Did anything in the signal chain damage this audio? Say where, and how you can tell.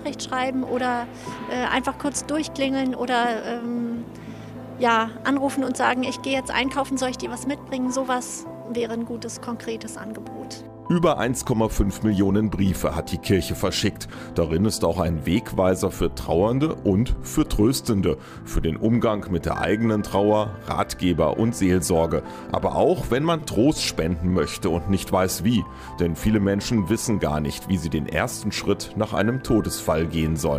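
Yes, a repeated buffer at the driver/buffer stage at 23.4 s. A 5.8 ms slice, which fits a 256-sample buffer, plays three extra times as a brief buzz, with hard joins. The waveform shows identical repeated blocks, and the spectrogram shows a thin vertical streak.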